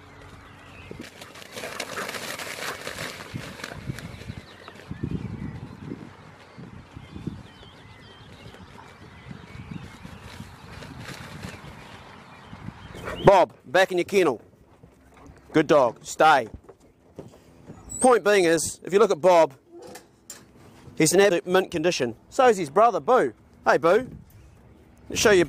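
At 3.51 s, from 9.82 to 9.84 s, at 21.3 s and at 23.39 s there are brief glitches from damaged data in a compressed stream. Corrupted bytes made the decoder misread frames, lose sync and hunt for the next frame header, so each event lasts only 10 to 20 ms. On a spectrogram each shows as a thin vertical disturbance. On the waveform it appears as a short disruption that breaks the surrounding shape.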